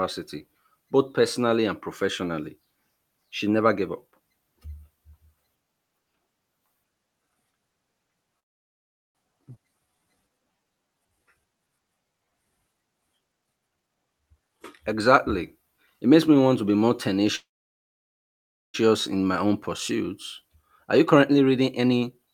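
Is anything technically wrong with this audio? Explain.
Yes, the speech has several delivery faults typical of a network call.

Call audio freeze, 8.39 to 9.17 s and 17.35 to 18.76 s. Packets were likely held up on the way, so the jitter buffer ran dry and the receiver had to fill the wait itself. It stretched the last sound out briefly, then fell to silence for about 0.75 s in the first case and about 1.3 s in the second. When delivery resumed, speech picked up exactly where it had stopped. Nothing is lost, but each pause inserts dead air and pushes everything after it later.

Skip ahead, 9.55 to 9.58 s. Shortly after the first freeze, roughly 0.4 s of speech is discarded while newer audio was already queued, which claws back some of the added delay. The jump is almost seamless, with only a tiny bridge of a few milliseconds. The two sides are butted together, so part of the utterance simply vanishes.

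Jitter buffer slow-down, 9.68 to 12.31 s. With its reserve depleted, the buffer rebuilt it by repeating single pitch cycles and slivers of pauses over and over. The result is speech running at about 86% speed, roughly 0.39 s longer than it should be. Pitch stays put, but sounds are drawn out and the delivery feels sluggish.

Jitter buffer speed-up, 13.32 to 16.77 s and 20.42 to 22.34 s. Here the buffer held more audio than its target, so it trimmed short runs of one or a few pitch periods repeatedly to shrink latency. The first stretch plays at about 121% speed, removing roughly 0.7 s. The second, running to the end, plays at about 110%, removing roughly 0.2 s. Pitch is preserved, but the talking sounds rushed, more noticeably in the first stretch.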